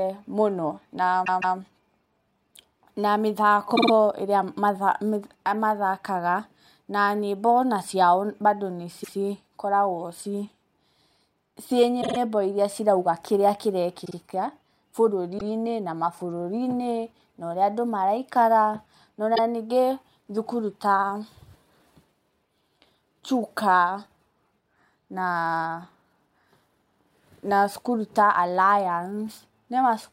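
Speech with repeated frames: runs of compressed frames were played again at 1.24, 3.75, 9.03, 12.01, 14.04, 15.37 and 19.35 s (between "maraikara na" and "ningĩ thukuru ta"). Blocks of 26 to 157 ms are heard as stutters.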